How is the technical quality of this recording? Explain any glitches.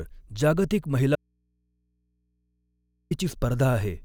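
The recording has one serious glitch, an audio dropout to a faint residue, from 1.15 s to 3.11 s. The wanted speech signal was likely lost upstream while the path after the break stayed live, so for nearly two seconds the speech vanishes abruptly, leaving only mains hum from the open input, about 50 dB below the normal level.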